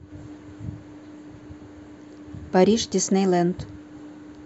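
No technical faults can be heard anywhere in the speech.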